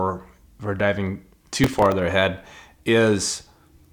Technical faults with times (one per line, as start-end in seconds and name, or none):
1.64-1.92 processor overload crackle